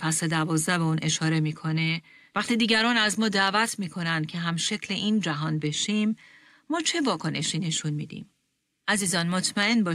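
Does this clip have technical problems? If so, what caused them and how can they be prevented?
No, nothing stood out as a technical problem on listening to this speech recording, so there is nothing here to trace back or prevent.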